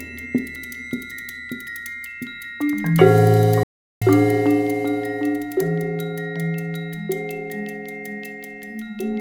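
At 3.63 s the sound cuts off mid-flow and stays silent until 4.02 s, a gap of about 0.38 s, before carrying on. This is a playback stall, likely caused by the player running short of data or its thread being held up so nothing reached the output. On a waveform the trace collapses to a flat line for that span. On a spectrogram it shows as a clean vertical band with no energy at any frequency, edged by abrupt onsets.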